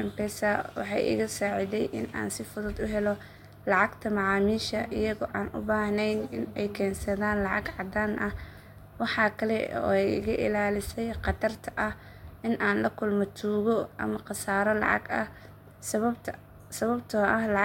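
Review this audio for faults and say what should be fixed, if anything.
I found no faults in this audio, so there is nothing that needs to be fixed.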